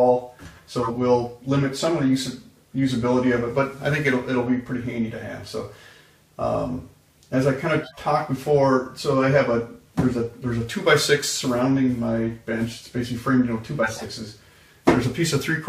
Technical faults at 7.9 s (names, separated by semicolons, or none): corrupt frame decoded